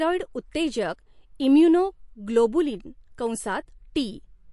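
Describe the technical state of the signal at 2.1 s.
At 2.1 s the speech carries MP3 compression artefacts, present throughout. Nothing sounds above 11.2 kHz. Sibilants swirl and chirp, likely from a starved encoder near 48 kbps.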